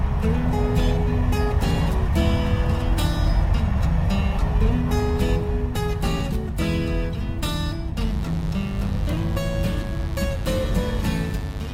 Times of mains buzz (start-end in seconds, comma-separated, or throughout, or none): 7.97-11.74